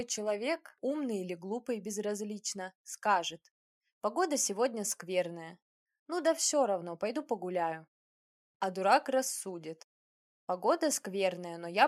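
No technical faults can be heard anywhere in this recording.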